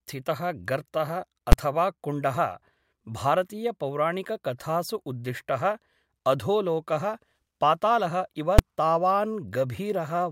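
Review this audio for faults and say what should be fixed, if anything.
A calculation in the processing chain produced invalid numbers at full scale at 1.52 s and 8.59 s, pinning the output to one extreme value for blocks of 10 ms and 5 ms. Each block is short enough to land as one loud bang in the speech. Checking for infinite and invalid values inside the processing, and replacing them with silence before they reach the output, would prevent this.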